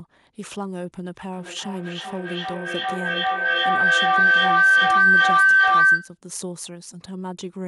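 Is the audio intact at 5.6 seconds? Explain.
No. Feedback howl runs from 1.33 to 6.19 s. A microphone-loudspeaker loop keeps gaining level. It howls near 1.5 kHz, with the loop repeating about every 0.4 s, up to about 15 dB above the speech.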